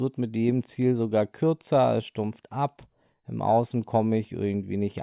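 No technical faults can be heard anywhere in the recording, and the signal stays steady and continuous throughout.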